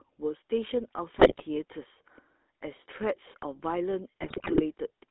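Throughout, the speech has a buzzy, gravelly roughness, and everything sits in a narrow band from about 250 Hz to 3.6 kHz, with no air above. That is the GSM full-rate codec, plainly audible here. It rebuilds the voice from a vocal-tract filter driven by a coarse, regularly spaced pulse excitation, so fine detail between pulses is lost and the texture turns grainy. The thin sound fits a 13 kbps mobile link.

From 1.14 to 1.43 s the sound breaks into squawks, pops and a gargling smear. It happens again, harsher and longer, from 4.21 to 4.74 s. These are GSM bit errors. Corrupted bits reach the decoder, and damaged filter, pitch or gain values twist the spectrum or spike the level frame by frame. The second burst is worse, which points to a higher error rate, roughly five percent of bits flipped.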